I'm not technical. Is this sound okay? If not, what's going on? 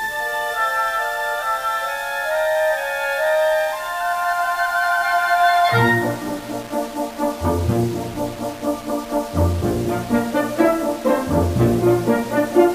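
No. The sound is grainy and rough the whole way through. The graininess shifts as the sound changes, and the quietest parts sputter or drop out. This is likely low bit depth without dither: the sound was stored with about 6 bits and simply rounded.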